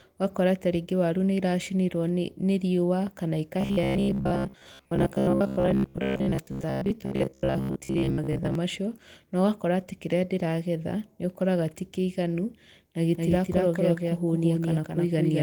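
Robotic sound from repeated short buffers, 3.61 to 8.55 s: audio likely arrived too seldom, so roughly 70% of the stretch is short repeated slices, imposing a rigid 66.8 Hz metallic buzz. Doubled audio track, from 13.17 s to the end, just after "ti kĩiganu na": a second copy, about as loud, likely runs around a fifth of a second behind, starting abruptly.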